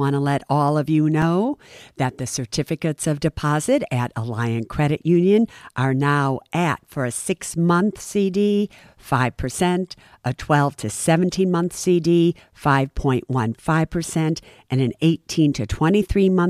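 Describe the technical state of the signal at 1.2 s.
At 1.22 s, just after "let all of you", the speech drops into a block of digital silence lasting about 2.9 ms, a length that fits a 128-sample buffer. The output stage most likely failed to deliver that block in time, so zeros went out in its place. The signal cuts out and returns abruptly, with no fade on either side. At this length the hole itself is too short to register as a gap and is heard as a tick or dip.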